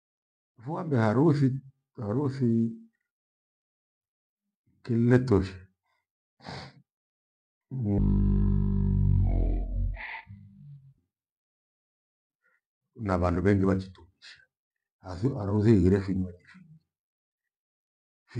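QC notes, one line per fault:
7.98 to 10.98 s, stereo read as mono: for these three seconds the speech drops to half speed and sits a full octave lower, because the left and right samples are being taken alternately as one channel, so each frame stretches over twice the time. On a spectrogram the harmonics compress downward by half across this span, with a fainter mirrored copy filling the upper half of the band; the waveform looks visibly stretched.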